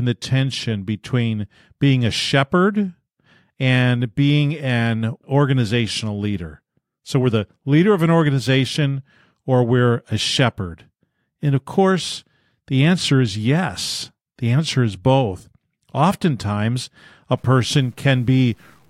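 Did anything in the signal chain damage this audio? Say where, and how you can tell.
Yes. From 17.38 s to 18.89 s the speech turns grainy, with a level-following grit about 40 dB below the signal. This is low bit depth without dither, likely from a sample-format conversion. The sound fits truncation to 9 bits, which leaves an error that tracks the waveform.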